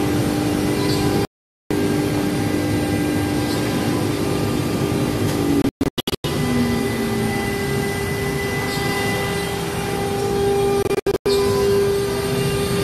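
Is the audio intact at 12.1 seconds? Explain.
Yes, the audio is intact at 12.1 seconds, with nothing there that breaks or disturbs the sound.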